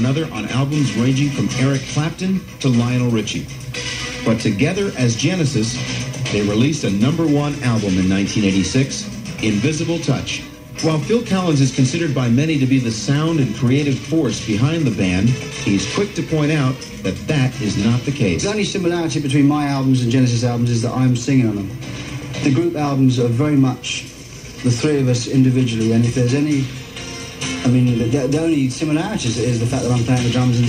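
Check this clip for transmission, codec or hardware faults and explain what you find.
Nothing stood out on listening to this clip.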